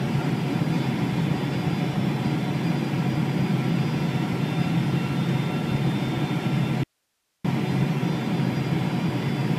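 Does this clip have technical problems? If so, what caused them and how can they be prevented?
Yes. The signal path most likely lost its source for a moment while everything after the break stayed live, which produces an audio dropout to a faint residue from 6.84 to 7.45 s. For about 0.61 s the sound cuts out abruptly in mid-flow, and the gap holds only hiss, roughly 50 dB below the normal level, before the audio snaps back just as suddenly. To prevent it, secure and test connectors and cables, and monitor the source feed during recording.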